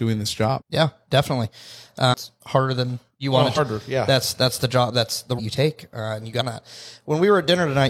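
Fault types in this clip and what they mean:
Compressed frames skipped: the speech jumps ahead five times, losing roughly a fifth to half a second each time, in steps that fit whole 46 ms frames. Unlike a dropout, there is no silent gap.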